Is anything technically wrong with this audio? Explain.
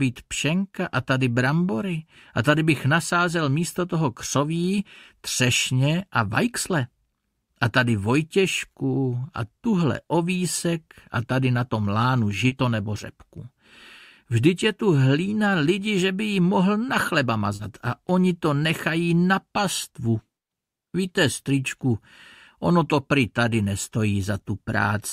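Yes. There is short concealed packet loss at 12.47–12.54 s and 17.55–17.62 s. Each time about 40 ms of audio arrived too late to decode, so the receiver extended the preceding sound to fill the gap and then crossfaded back. You hear a brief smear or wobble. On a spectrogram, the filled stretch shows repeated or blurred harmonics or flat noise, with a soft seam on the waveform.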